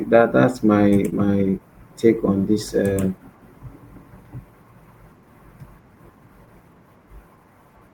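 At 0.89 to 0.93 s there is a short stall from a late packet. The jitter buffer ran dry, so the receiver stretched the last sound by 20 ms and resumed where it left off. Nothing is lost, but the delay grows by 20 ms. On a spectrogram the harmonics run flat and smeared, with a faint dip in the waveform envelope.

Short concealed packet loss follows directly at 0.93 to 0.97 s, then recurs at 1.09 to 1.14 s, at 1.50 to 1.54 s just before "take on this", and at 2.93 to 2.98 s just after "take on this". Each time about 20 ms of speech never arrived. The gap was filled by extending the preceding sound, heard as a brief smear or wobble. Each one appears as a blurred vertical band where the spectral detail flattens, with a small kink in the waveform.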